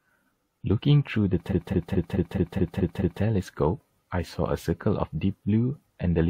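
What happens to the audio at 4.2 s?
Nothing goes wrong at 4.2 s; the speech carries on intact through that moment with no dropout, click or other fault.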